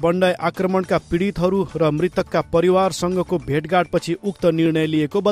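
From 0.56 to 4.66 s a click recurs every 0.82 s, about seven in all. These are likely clock drift buffer slips, where two mismatched clocks drop or repeat about 15 samples each time. The strictly regular spacing sets them apart from random dropouts.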